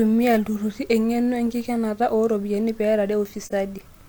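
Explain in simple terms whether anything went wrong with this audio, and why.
At 3.45 to 3.52 s the speech fades into a brief, soft gap. That's AAC frame loss with muting: a lost chunk was filled with silence.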